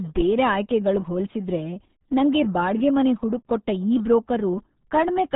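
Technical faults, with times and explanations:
Throughout, RealAudio 14.4 codec: the speech sounds muffled and gargly, with nothing above 3.8 kHz. This heavy damage fits an 8 kbit/s dial-up-era codec, which drops the upper band and coarsely models what remains.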